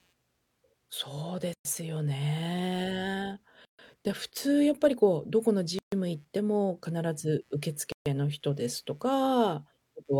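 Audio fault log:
Throughout: computer activity noise, a faint buzzing at a pulse rate of roughly 150 Hz, about 45 dB below the speech. Processor or peripheral load shifts the shared audio ground, so the buzz follows the machine's activity rather than the speech.
1.54–1.65, 3.65–3.79, 5.79–5.92, 7.92–8.06 s: gap at a join of encoded pieces, silences of about 116 ms and then 136 ms cutting into continuous speech, with smeared edges. Pieces of roughly 2 s were encoded separately and joined untrimmed, leaving encoder start delay and end padding.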